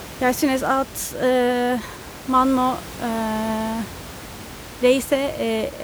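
Nothing stood out on listening to this speech recording; only the room's own background noise can be heard, sitting about 16 dB below the speech.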